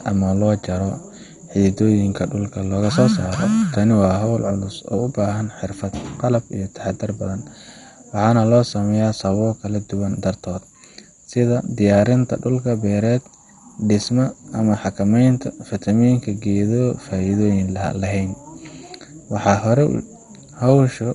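Throughout the speech, nothing above 11.2 kHz survives, and a heavy gurgling graininess, likely MP2 compression at a low bitrate near 56 kbps, distinguishes it from a simple low-pass filter.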